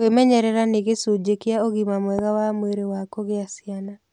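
At 2.19 to 2.21 s, a single loud pop stands well above the speech. It is likely a brief voltage spike, perhaps a switch or static. Speech continues underneath.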